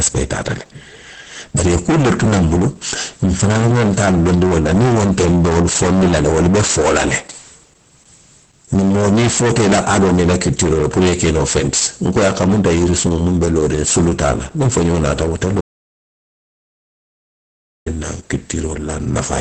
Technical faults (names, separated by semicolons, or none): hard clipping; Opus voice compression; audio dropout to silence